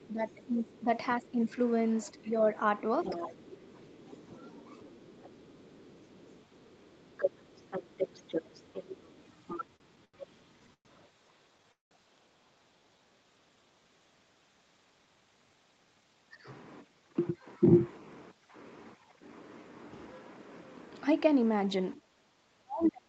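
From 0.05 to 2.41 s, 3.1 to 4.28 s and 4.96 to 5.17 s, the speech dips by roughly 5 to 15 dB, likely speech suppressed in double talk as the echo canceller ducks both sides. A second, quieter voice underneath, likely the other side's voice leaking through, appears at 3.02 to 3.55 s, briefly near 4.1 s, and faintly through 5.22 to 11.09 s. It is an added voice rather than a dip. Between 9.53 and 10.87 s, repeated stalls (stutter) break the sound with eight short held fills, the longest 112 ms, dragging it without losing anything. At 11.72 to 11.93 s a single call audio freeze, likely from delayed packets, fades into about 150 ms of silence before resuming intact. It is one long halt, not a series. At 12.79 to 12.99 s a jitter buffer slow-down stretches the audio to 86% speed at unchanged pitch. From 14.78 to 16.47 s a jitter buffer speed-up compresses it to 112% at the same pitch, so it sounds hurried rather than higher. 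From 21.95 s to the end, double-talk suppression cuts the speech deeply, by around 40 dB, with a brief leaked voice at 22.82 to 22.92 s.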